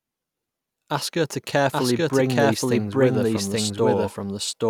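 From the start of the speech to the end, a doubled audio track is present. A second, full-band copy of the same speech trails the original by roughly 0.7 s at about equal loudness. It carries no decay or added room colour, so it reads as a distinct out-of-step repeat rather than an echo. The likely cause is the signal being captured twice, once through a slower path, or an edit holding two offset copies.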